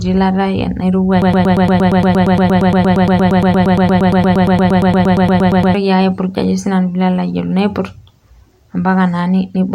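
Speech, interrupted by a broken-record loop from 1.22 s to 5.75 s. A single fragment about 116 ms long repeats exactly and back to back, 39 times, producing a rapid mechanical stutter for roughly four and a half seconds. The likely cause is a stall in the player, encoder or stream that left it resending the last fragment in its buffer. Whatever speech belonged in that span is missing.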